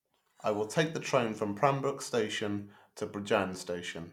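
Listening to the speech recording, nothing stood out as a technical problem at any point.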